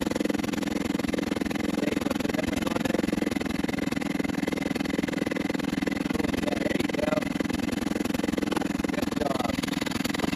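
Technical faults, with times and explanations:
Throughout, overlap-add ripple: windowed frames were rejoined with an overlap whose gains don't sum to a constant, so the level dips by about 60 dB roughly twenty times a second, a harsh robotic flutter; the waveform shows regular pinched gaps, the spectrogram evenly spaced vertical stripes.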